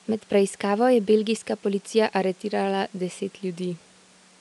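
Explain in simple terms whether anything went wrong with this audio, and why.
Nothing went wrong with this speech recording. A quiet background noise from the room sits well underneath the speech, but that comes from the room the microphone was in and is not a problem with the system.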